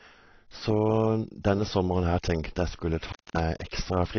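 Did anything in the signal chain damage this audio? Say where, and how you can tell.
Yes. Throughout the speech the sound is dull and smeared, with nothing above 6.6 kHz and a fizzy, warbling edge on sibilants. At the codec stage, the likely cause is AAC compression at a low bitrate near 24 kbps, which drops high bands and coarsely quantises the rest.

From 3.06 to 3.40 s the audio cuts out for 226 ms, with crackle where it breaks and returns. That is an intermittent contact in the analogue wiring: a loose cable or plug briefly opening the connection, so the signal vanishes and clicks as contact is remade.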